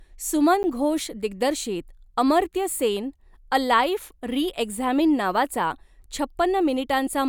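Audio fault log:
0.63 s: block of digital silence. About 10 ms of the speech drops abruptly to silence and returns with no fade, so the hard edges at each end merge into a single tick. Output buffer not filled in time is the likely cause.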